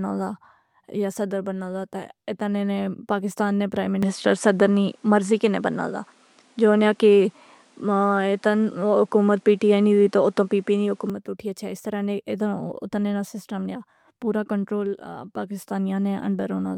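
Input switched to a poorer device, 4.03 to 11.10 s: right after "نے پاکستان نے پرائیم", the speech abruptly dulls with no gap. It loses everything above 11.4 kHz, shifts level by around 5 dB and gains a faint hiss roughly 40 dB down, likely because recording moved to a narrower-band input.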